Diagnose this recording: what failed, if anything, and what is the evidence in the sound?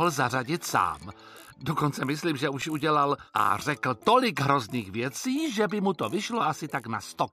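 CD scratch ticks at playback: five evenly spaced ticks from 2.19 to 3.05 s, the longest about 5 ms. Unrecoverable data recurs once per disc revolution, and each tick appears as a thin vertical broadband line.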